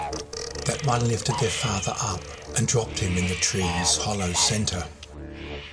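Nothing goes wrong anywhere in the clip; there are no dropouts, glitches or other technical problems to point to at any moment.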